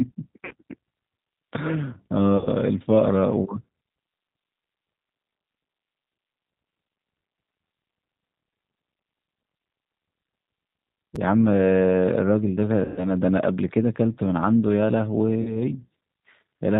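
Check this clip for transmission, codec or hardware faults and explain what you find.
Yes, there are faults. Codec damage runs through the whole speech clip, packet loss concealment is audible four times, and there is one brief out-of-order chunk.

G.729 codec, throughout. The speech is plainly coded. Nothing above 4 kHz survives, so it sounds narrow and dull. The decoder rebuilds each 10 ms frame from a vocal tract filter, a pitch predictor and a few pulses. That sparse model makes voices slightly rough and synthetic. The damage is plainly audible and fits the 8 kbit/s G.729A variant.

VoIP packet loss concealed by the speech codec, at 0.45 to 0.53 s, 2.37 to 2.49 s, 12.85 to 13.07 s and 15.42 to 15.59 s. The missing audio lasts about 60, 90, 120 and 30 ms. During each gap the decoder repeats its last pitch and filter at falling gain. The sound stretches into a buzzy tone or coloured noise that fades. 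Each frame builds on the last, so the speech stays weak briefly after packets return.

Chunks out of order, at 11.15 s. One chunk of about 5.8 ms plays one chunk late, after the audio that should follow it. No audio is lost, but the order is wrong. That leaves three hard joins packed into about 12 milliseconds. It is heard as a tiny jumbled moment.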